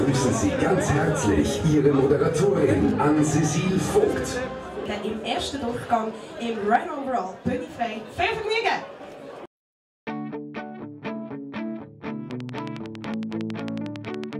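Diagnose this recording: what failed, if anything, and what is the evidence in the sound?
A train of clicks runs from 12.31 s to 14.34 s. About twenty near-identical pulses arrive at a steady 10.9 per second, peaking roughly 10 dB above the audio. They persist through gaps too. The stage is likely the analogue wiring or interface, picking up periodic interference.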